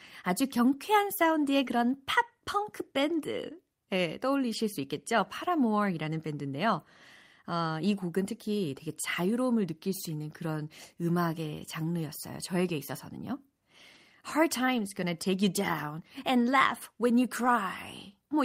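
At 1.65 to 1.69 s, right after "아주 경쾌한 사운드의" and before "팝 펑크 밴드 예", there is a short concealed packet loss. About 20 ms of the stream arrived too late to decode. The receiver stretched the preceding sound to cover roughly 11 ms of it and then crossfaded back, which you hear as a quick smear or wobble. On a spectrogram it shows as a thin vertical band where the harmonics flatten into a copy of the frame before, with a seam in the waveform where the real signal resumes.

From 1.67 to 1.69 s in that same spot, and again at 13.95 to 13.97 s and at 17.45 to 17.47 s just after "and laugh when you", a single lost packet was rebuilt from error correction. Each time the following packet carried a low-bitrate copy, so the decoder filled the 20 ms with no gap. Those frames sound grainy and rough. A spectrogram shows a brief column of blurred harmonics with extra noise for that 20 ms.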